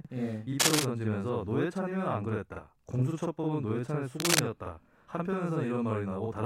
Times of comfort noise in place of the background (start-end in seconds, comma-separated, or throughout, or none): none